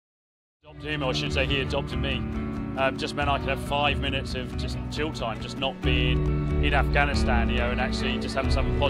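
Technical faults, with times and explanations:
No technical faults are audible: the sound rises in a smooth editorial fade-in from around half a second to 1.25 s, with no step or click.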